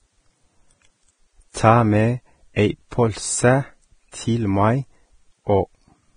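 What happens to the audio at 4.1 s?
At about 4.12 s a brief pre-echo appears: a hiss of roughly 16 ms arrives just ahead of a sharp speech onset. The transform block spreads its quantisation noise evenly, filling the quiet before the attack. On a spectrogram it shows as a thin vertical smear preceding the onset. On a waveform it is low-level fuzz before the jump.

Underneath, the speech is hissy and grainy with nothing above 9.7 kHz, likely from heavy Vorbis compression at a rate that fits around 22 kbps. Coarsely quantised treble turns into noise. The spectrogram shows a hard ceiling at 9.7 kHz and speckled high bands.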